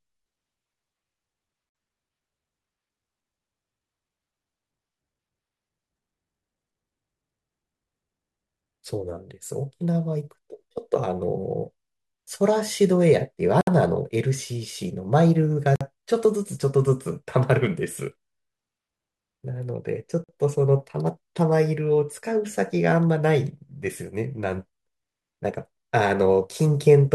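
Gaps at joins of encoded pieces open four times in this speech clip: 1.69 to 1.75 s (about 56 ms), 13.61 to 13.67 s (about 63 ms), 15.76 to 15.81 s (about 49 ms) and 20.24 to 20.29 s (about 46 ms). The audio was encoded in separate segments and spliced without trimming, so each encoder's start-up delay and padded final frame remain as brief silences with smeared edges. The speech then resumes where it stopped.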